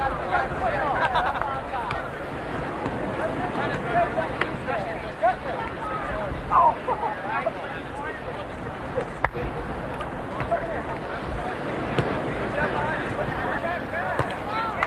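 Nothing here goes wrong at any point; it's just audio that came over a call path, with the gentle coding texture and the top end rolling off around 12 kHz that you'd expect from an Opus stream at a moderate bitrate, somewhere near 40 kbps.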